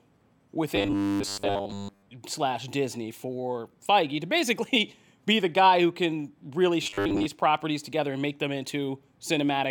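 Audio likely arrived too seldom, so tiny 10 ms buffers were replayed in place of missing sound, giving robotic sound from repeated short buffers: from 0.76 to 2.09 s, then 6.83 to 7.26 s after "guy who can really", a rigid metallic 100 Hz buzz covers most of the speech.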